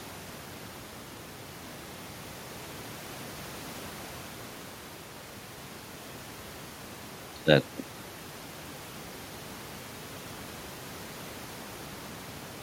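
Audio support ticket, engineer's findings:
No system faults found.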